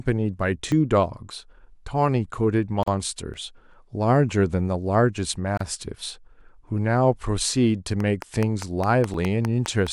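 At 0.72 s the speech jumps abruptly forward. The same happens at 3.34 s and 9.14 s. These are most likely dropped buffers from an overrun: the audio was overwritten before being read, losing about 5, 10 and 15 ms. The two sides butt straight together with no silence in between.

At 2.83 to 2.88 s and 5.57 to 5.61 s there are gaps at joins of encoded pieces. Short silences of 44 ms and 31 ms open because each piece's encoder start delay and end padding were left in. The edges are smeared. Unlike an overrun, the speech resumes exactly where it stopped.

From 8.0 to 9.88 s a train of clicks ticks over the speech. About ten near-identical pulses arrive at a regular 4.79 per second, roughly 10 dB above the signal, likely from interference or a faulty connection. Their matching shape and steady pace set them apart from the lone overrun jump at 9.14 s.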